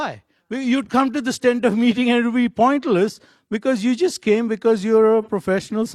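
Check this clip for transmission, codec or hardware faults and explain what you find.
There's one fault worth flagging: AAC frame loss with concealment, from about 5.22 to 5.29 s, right after "you just came because". The gap is about 43 ms, which points to a single dropped AAC frame. The decoder papered over it by reusing the last good spectrum with randomised signs or interpolated energy, so there's no hard dropout. Instead you hear a brief smeared, noisy, phasey patch where the detail goes soft for a moment.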